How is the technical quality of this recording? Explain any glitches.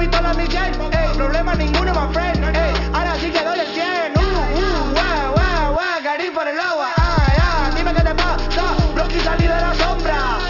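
The recording has one fault that runs from start to finish: aliasing. The sound appears to have been brought down to a much lower sample rate without an anti-aliasing filter, which fits a drop to 12 kHz. Everything that was above 6 kHz folds back below that line at unrelated frequencies, fairly strongly, roughly 15 dB under the signal. Sibilance and bright detail turn gritty and metallic, and the spectrum stays full right up to about 6 kHz. A properly filtered rate reduction would instead sound dull and muffled.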